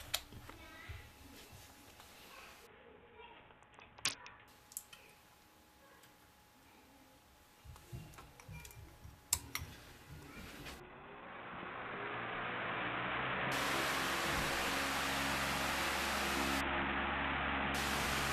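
At 2.67–4.48 s, 10.80–13.52 s and 16.61–17.74 s there's a Bluetooth SBC bit pool drop. The treble dulls and grit creeps in, which points to the bit pool falling from 28 to 5.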